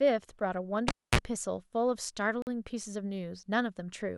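Time stamps between two stream segments leave a hole. The player fills it with silence, so a gap between stream segments cuts the speech at 0.40 s for about 7 ms, and again from 2.42 to 2.47 s for about 47 ms. Both have hard edges, and their spacing fits 2-second segments. At 0.88 s a live cable is pulled and plugged in: a pop, then about 250 ms of near silence, then a roughly 33 ms burst of 60 Hz mains buzz as the tip touches, and a second pop when the speech returns at 1.19 s.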